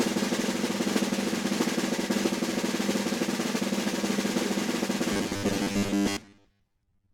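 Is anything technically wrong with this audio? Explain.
Yes. From 5.13 s to the end, robotic sound from repeated short buffers turns the music into a rigid 100 Hz metallic buzz. Audio likely arrives too seldom, so a 10 ms slice loops for most of it. A spectrogram shows a 100 Hz harmonic comb, and the waveform shows roughly repeating 10 ms cycles.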